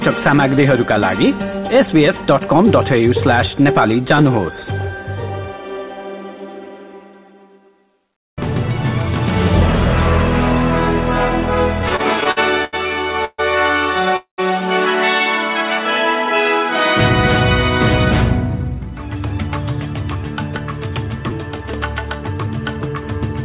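From 11.82 to 12.75 s, packets reached the receiver late or more slowly than they were being played, so the jitter buffer kept running dry, producing repeated stalls (stutter). Seven times the receiver stretched the last sound to cover the wait. The longest wait was 81 ms, and about 208 ms was filled in all, roughly a fifth of that stretch. Nothing drops out, but the sound hiccups and drags, with brief smeared repeats breaking its flow.

At 13.25 to 13.40 s comes a call audio freeze, likely caused by packets held up in transit so the buffer emptied. The receiver carried the last sound forward for 136 ms, letting it fade to silence for the final 30 ms, then resumed where it left off. The result is a short buzzy hold and a tiny gap that pushes everything after it later.

A second call audio freeze, at 14.16 to 14.40 s, is longer. Again the likely cause is delayed packets draining the buffer. 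Here 216 ms was filled, and the continued sound dies away into 110 ms of silence before playback picks up. That makes a stall and a pause, though nothing is lost.

At 21.30 to 21.32 s a 10 ms chunk of audio arrived one slot late and plays after the chunk that should follow it, so the chunks are out of order. No audio is missing, but the swapped order leaves hard joins. These are heard as a quick jumble. Throughout, nothing above 4 kHz is heard, which fits a G.711 mu-law call path at 64 kbps.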